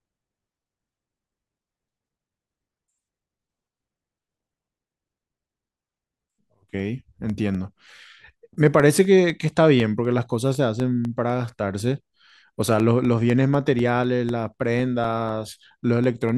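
From 0.29 to 16.29 s, periodic USB or driver dropouts replace about a millisecond of the speech with silence every 0.25 s, ticking with a strict regularity that random clicks lack.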